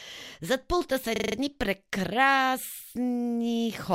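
A rapid, rattling stutter cuts in at 1.16 s and runs until 1.36 s: one 40 ms fragment of the speech repeats five times in a row, giving a machine-gun judder at 25 Hz. This is a system hang loop. The computer or its audio driver briefly stalled, and the sound hardware kept replaying the same 40 ms stretch of its ring buffer until fresh data arrived. Practically nothing of the original audio goes missing around it.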